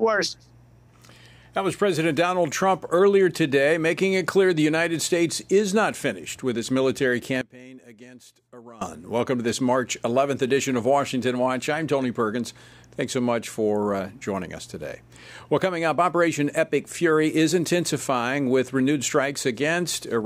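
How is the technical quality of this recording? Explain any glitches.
The recording has one clear glitch. From 7.41 to 8.81 s, about 1.4 seconds, the sound suddenly drops by about 20 dB, as if the centre of the mix has been scooped out and only a faint residue remains. The likely cause is one channel inverted: with one stereo side in reversed polarity, everything common to both sides cancels when they combine, leaving just their small difference.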